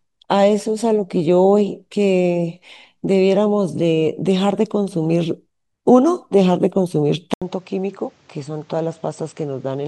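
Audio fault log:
7.34–9.88 s: input switched to a poorer device. After a gap of about 80 ms, the speech loses everything above 8.2 kHz, drops roughly 10 dB, and gains a noise floor about 30 dB down, likely from recording moving to a narrower-band microphone.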